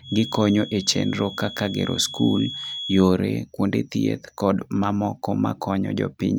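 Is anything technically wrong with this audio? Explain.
Yes. From 0.0 to 3.08 s, a feedback whistle sits behind the speech: a thin, steady 3.4 kHz tone roughly 15 dB below the speech that swells and fades slowly. Its likely cause is a loudspeaker-to-microphone loop held just short of runaway. A spectrogram shows a narrow horizontal line at 3.4 kHz ending near 3.1 s.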